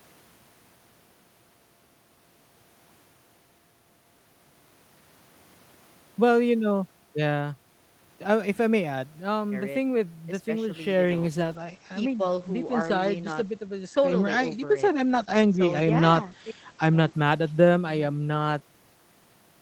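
A call bitrate drop begins at 11.06 s and lasts to the end. The encoder's budget falls from 32 to 12 kbps, so speech is coded more coarsely and the bandwidth narrows from 20 kHz to 8 kHz. The voice turns muffled and rough, bottoming out for about 5.5 s.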